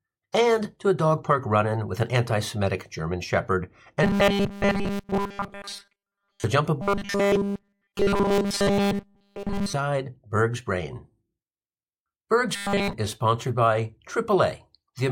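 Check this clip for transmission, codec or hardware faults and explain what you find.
Robotic sound from repeated short buffers occurs from 4.03 to 6.44 s, 6.82 to 9.74 s and 12.56 to 12.93 s. The speech becomes a rigid metallic buzz at 200 Hz, essentially all repeated material, likely from a 5 ms buffer looping while fresh audio arrives too late.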